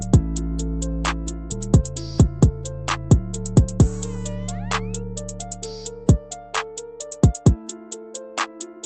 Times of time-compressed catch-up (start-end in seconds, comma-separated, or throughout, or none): none